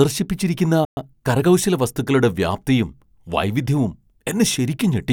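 At 0.85 s the speech cuts out abruptly and the output stays silent until 0.97 s, a gap of 120 ms in mid-flow. This is a playback stall. The player most likely ran short of buffered data, or its audio thread was held up, so nothing reached the output for that interval. When sound returns, the speech carries on from where it broke off rather than skipping ahead.

From 0.97 s to 1.45 s the speech runs fast, at about 1.25 times normal speed, before settling just ahead of "വസ്തുക്കളുടെ വ്യാപ്തിയും വൈവിധ്യവും". This is time-compressed catch-up. To recover the time lost in the stall, the player drops short segments and cross-fades across the joins, shrinking its backlog without shifting pitch. The result sounds hurried but at a natural pitch.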